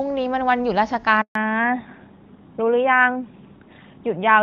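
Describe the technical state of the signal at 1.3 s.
At 1.3 s the signal is inside a handover gap running from 1.21 to 1.35 s. The call was being passed from one network link to another, and for about 140 ms no speech frames reached the decoder. The sound fades out within a few tens of milliseconds of 1.21 s and stays silent until the new link takes over, so whatever was said in that span is simply missing.

When the audio resumes at 1.35 s, it comes back after a fallback to narrowband that lasts to the end. The call has dropped from HD Voice to an older narrowband codec, and the sound points to a switch from AMR-WB at around 23.85 kbit/s to AMR-NB at 12.2 kbit/s. Nothing above 4 kHz survives, so the speech turns duller and rougher, losing the crisp sibilance the wideband link carried before the gap.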